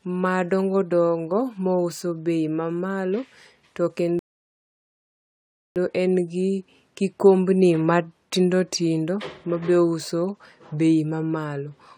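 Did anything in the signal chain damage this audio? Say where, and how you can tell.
Yes: a rebuffering stall at playback, from 4.19 s to 5.76 s. The speech drops to silence for about 1.57 s, then resumes exactly where it stopped, with nothing skipped. The player exhausted its downloaded audio and waited for more to arrive, adding time rather than losing content.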